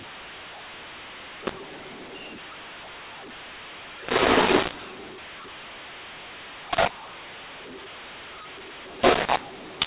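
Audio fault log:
throughout: mu-law and A-law mixed up. A-law speech decoded as mu-law scrambles levels, so it sounds harsh and pauses fill with noise.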